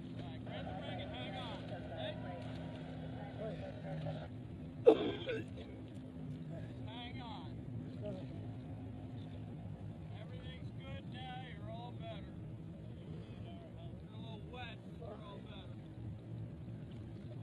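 From 3.49 s to the end at 17.43 s, the audio abruptly slows to about 0.70 times its pace while the pitch holds steady, so it drags. This time-stretched section was likely produced by software lengthening the passage by repeating short pieces.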